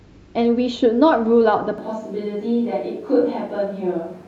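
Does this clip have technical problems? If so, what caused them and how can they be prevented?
Yes. Switch to a distant microphone from 1.78 s onward: sudden roomy, hollow, bass-light sound, about 5 dB quieter, likely because the close mic failed. Monitoring the close microphone live and recording a backup of its feed prevents this.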